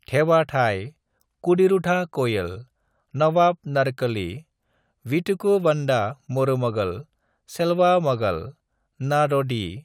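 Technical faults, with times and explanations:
No technical faults can be heard in this speech recording. There is nothing here to mark with a time or to explain.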